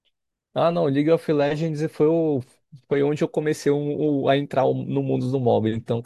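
Speech recording, no technical faults heard.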